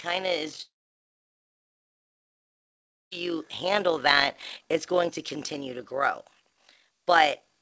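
Framing that overlaps without summing to a constant gain causes an overlap-add ripple across the whole clip. The level swings by about 6 dB at a frame rate of roughly 50 per second, giving the speech a fast, rough flutter from start to finish.

At 0.62 s the stream breaks off until 3.13 s, most likely a long network dropout. The receiver's concealment briefly carries the last sound as a fading buzz, then leaves near silence, and speech returns with about 2.5 s missing. Across the clip there is nothing above 8 kHz, consistent with a wideband call codec.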